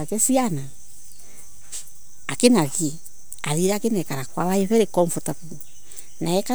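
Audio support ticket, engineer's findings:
DC offset, throughout the speech. Constant shift of about -30 dBFS. Inaudible, but eats headroom and shows as steady energy at 0 Hz. Probable source: input stage or converter bias, uncorrected by a high-pass filter.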